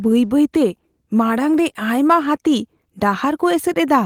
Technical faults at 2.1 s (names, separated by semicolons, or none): none